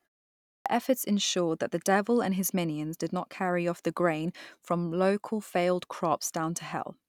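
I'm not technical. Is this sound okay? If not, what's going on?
No. There is a clipped start after a pause. The clip opens with about half a second of silence. At 0.52 s the playback device is still waking up, so roughly 0.14 s of sound is swallowed and speech begins abruptly, missing its opening, just before "efforts ensured that the".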